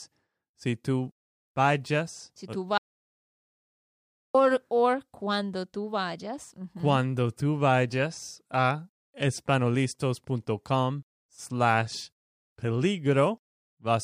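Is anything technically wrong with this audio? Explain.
Yes. From 2.78 to 4.35 s, an audio dropout to silence: input likely lost while recording continued, so speech cuts out into 1.57 s of dead, tone-free silence.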